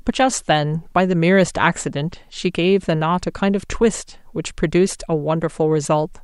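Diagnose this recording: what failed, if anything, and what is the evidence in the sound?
Nothing in the signal points to a failure at any stage between capture and playback: level, timing and frequency content stay consistent across the whole recording.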